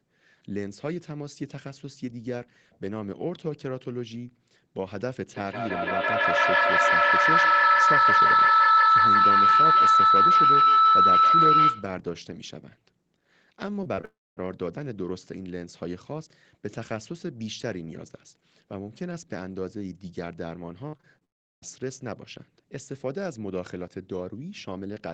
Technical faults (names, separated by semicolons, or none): feedback howl; short concealed packet loss; long network dropout; repeated packet loss (robotic sound)